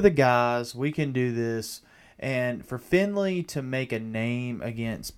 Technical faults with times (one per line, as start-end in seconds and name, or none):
none